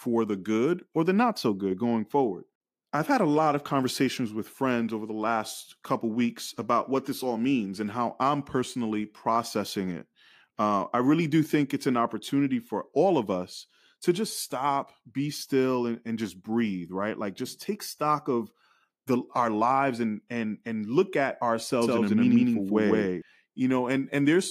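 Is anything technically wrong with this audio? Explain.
Yes. From about 21.8 s to 23.2 s there's a doubled audio track: a second, full-band copy of the speech sits roughly 150 ms behind the original at much the same loudness, so everything gets a slapback stutter. It's dry, with no decay or room colour, and it cuts in and out abruptly at both ends. The likely cause is a second, slower capture path, or an edit holding two copies out of step.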